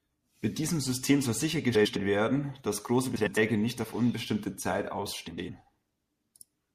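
Frames out of order: adjacent runs of frames were decoded swapped, consistent with runs of four frames, so the two roughly 105 ms halves of a stretch play exchanged. Garbled flutters occur at 1.75–1.96 s, just before "werden dass große", then at 3.16–3.38 s, before "nicht auf unbestimmte", and at 5.27–5.49 s.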